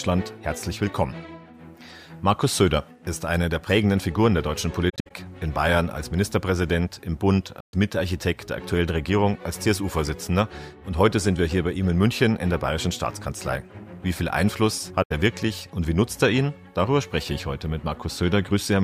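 AAC frame loss with muting leaves soft-edged holes at 4.89–5.11 s (broken up, longest around 70 ms), 7.60–7.74 s and 15.02–15.12 s. They appear as blank vertical bands on a spectrogram and tapered silences in the waveform.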